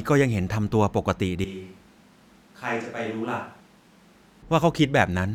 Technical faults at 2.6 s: switch to a distant microphone

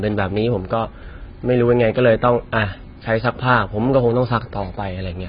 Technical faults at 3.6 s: AAC compression

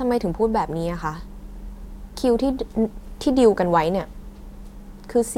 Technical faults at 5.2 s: none

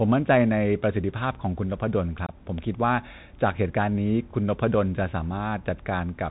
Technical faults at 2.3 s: Bluetooth CVSD headset codec; unconcealed Bluetooth headset packet loss

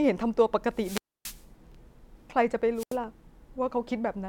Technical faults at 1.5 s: wireless microphone squelch dropout

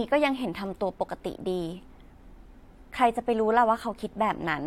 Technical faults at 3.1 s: none

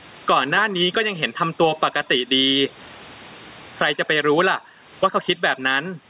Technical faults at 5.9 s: gain pumping

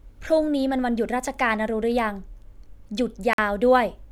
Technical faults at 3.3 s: Bluetooth stall

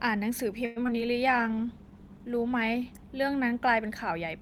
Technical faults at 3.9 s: none

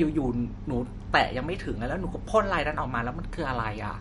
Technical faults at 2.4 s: MP3 compression

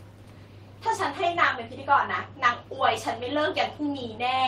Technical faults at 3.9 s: none

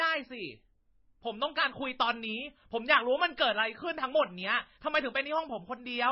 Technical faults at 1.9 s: transcoding between lossy codecs

